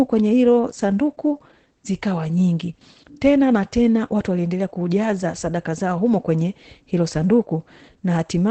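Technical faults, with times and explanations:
Throughout: Opus voice compression. The speech carries plainly audible coding damage from the SILK linear-prediction coder running in wideband mode, which fits a bitrate around 12 kbps with 20 ms frames. The coder squeezes the band and coarsely quantises the excitation, so the voice loses its air and takes on a rough, synthetic texture. A spectrogram shows a hard ceiling with nothing above about 8.6 kHz, and smeared harmonics in 20 ms blocks beneath it.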